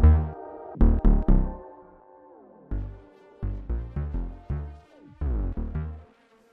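From 1.37 to 2.04 s, zipper noise accompanies a drop of around 15 dB. The gain falls in unsmoothed steps, about a hundred per second, each clicking faintly. The waveform envelope shows a fine staircase, and the spectrogram shows evenly spaced vertical streaks.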